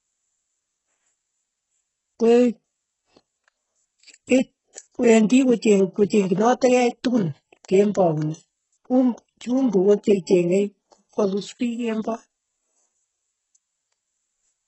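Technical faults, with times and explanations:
Throughout: HE-AAC compression. The speech is heavily damaged: the treble sounds synthetic, with gritty, lispy s sounds, and nothing is heard above 8 kHz. This is likely band replication filling the top from copied lower bands, which fits a very low bitrate near 8 kbps.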